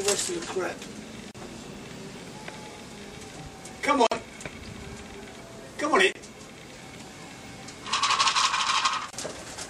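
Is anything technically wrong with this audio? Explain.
Yes. There are gaps at joins of encoded pieces at 1.31 s (34 ms), 4.07 s (47 ms), 6.12 s (28 ms) and 9.10 s (26 ms). Separately encoded segments kept their encoder delay and padding, so continuous sound briefly drops out, then resumes where it stopped.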